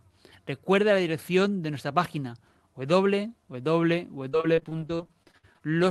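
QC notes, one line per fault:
4.29–5.62 s: repeated packet loss (robotic sound). A rapid run of short dropouts, the longest about 56 ms, with roughly a third of the stretch papered over by repeating the last bit of sound, so it turns choppy with chunks missing.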